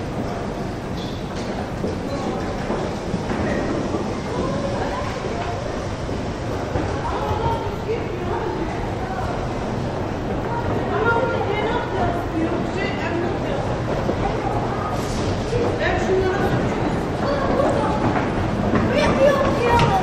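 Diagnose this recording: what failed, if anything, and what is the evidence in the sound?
Compressed frames skipped, a codec or storage fault: the sound jumps forward at 1.77, 3.12, 6.46, 14.08, 16.40 and 17.56 s, losing roughly 50 to 150 ms each time. Unlike a dropout, nothing is filled in; whole frames are missing or rejected, and playback joins across them.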